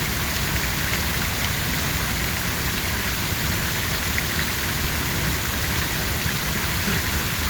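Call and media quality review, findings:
No audible defects found across the recording of sounds; no action required.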